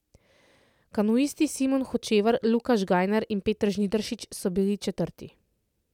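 Nothing goes wrong anywhere in this bit of speech, so there's no technical fault to point to at any moment.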